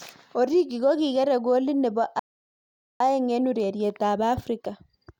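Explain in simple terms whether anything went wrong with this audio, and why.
Something did go wrong: a rebuffering stall. The player used up all the audio it had downloaded and had to pause until more arrived. In this speech clip that happens at 2.19 s, where the sound suddenly drops to silence. At 3.00 s it picks up again from exactly the point where it stopped, so nothing is skipped or lost. The clip simply runs about 0.8 seconds longer than it should because of that gap.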